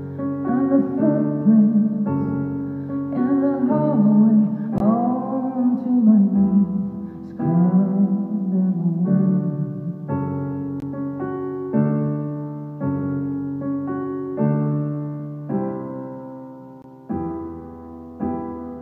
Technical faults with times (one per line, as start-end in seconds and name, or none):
4.78-4.80 gap between chunks
10.80-10.82 gap between chunks
16.82 gap between chunks